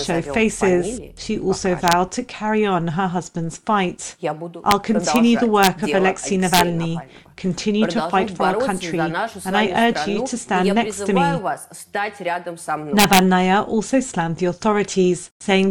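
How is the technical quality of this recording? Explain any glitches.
Technical quality suffers from integer overflow. It hits at 1.88–1.93 s, 4.71 s, 5.16 s, 5.63–5.67 s, 6.54–6.61 s and 12.99–13.19 s. Peaks overshoot the integer limit by up to about 6 dB and wrap to the opposite sign, causing violent cracks sharper than clipping.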